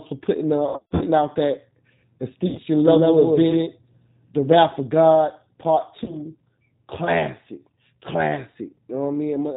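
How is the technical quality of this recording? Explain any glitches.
The recording is clearly degraded, with a low-bitrate speech codec colouring the whole clip and three brief stretches where lost packets were patched over.

Throughout, the sound carries the G.729 codec's signature. It is band-limited with nothing above 4 kHz, and the speech is slightly rough and synthetic, which fits an 8 kbit/s G.729A link. The codec rebuilds each short frame from a vocal-tract filter, a pitch predictor and a few pulses, so detail between those pulses is lost. That buzzy, model-built texture distinguishes it from a simple low-pass filter, which would dull the sound without roughening it.

Between 0.69 and 1.04 s, VoIP packet loss concealed by the speech codec takes away about 240 ms of audio scattered over roughly 320 ms, with the longest gap about 80 ms. Shorter losses follow at 2.47 to 2.60 s (about 80 ms) and 6.04 to 6.18 s (about 40 ms). 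The decoder stretches its last pitch and filter into a buzzy tone or coloured noise that fades. Recovery lags because each frame builds on the previous one. Plain dropouts would leave silence or clicks instead.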